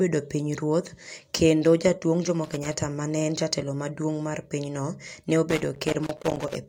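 Speech with loose connector crackle, irregular scratchy bursts from 2.44 to 2.82 s and 5.50 to 6.55 s, where a worn contact chops the signal; its randomness distinguishes it from regular digital clicks.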